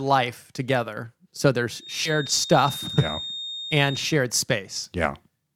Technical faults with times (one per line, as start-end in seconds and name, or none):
1.76-4.21 feedback whistle
2.05-2.12 compressed frames skipped